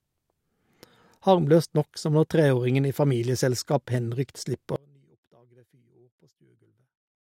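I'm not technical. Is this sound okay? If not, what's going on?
No. Audio dropout to a faint residue from 4.76 s, after "treåringen i familieselskap henrykt". The speech abruptly shrinks to a faint trace until the end, likely because the signal was lost while the line stayed live.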